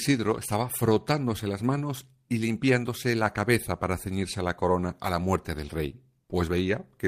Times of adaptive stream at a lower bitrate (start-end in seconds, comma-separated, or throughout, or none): none